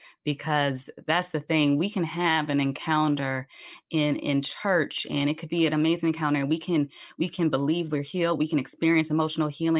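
Nothing stood out on listening to this speech recording.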